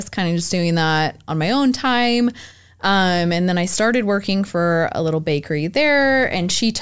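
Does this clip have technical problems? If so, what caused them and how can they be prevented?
No, nothing in this speech recording points to a technical fault, so there is nothing here to prevent.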